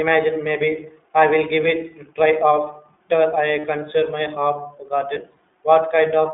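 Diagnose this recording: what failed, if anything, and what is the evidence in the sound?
The codec stage is at fault for the whole clip. This is the iLBC codec. The speech is confined to a telephone band of about 250 Hz to 3.6 kHz, and nothing reaches 4 kHz. Codec damage is plainly audible: the voice sounds rough and somewhat synthetic. iLBC codes each frame's excitation on its own, at low rate. The sound fits the 15.2 kbps mode with 20 ms frames.

The network stage also failed, with lost iLBC frames at two points. The first runs from 3.60 to 3.66 s, which fits two lost 20 ms frames. The second runs from 5.14 to 5.18 s, which fits a single lost frame. Each gap sounds like a briefly held, slightly buzzy vowel. The decoder repeats the last pitch cycle mixed with noise. Because frames stand alone, the speech recovers almost immediately afterward.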